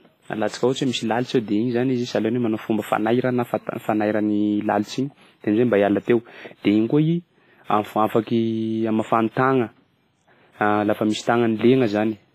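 Throughout the speech there is ringing, washy smearing and hiss that breathes with the signal, with nothing above 15.4 kHz. This is likely heavy WMA compression, consistent with about 24 kbps.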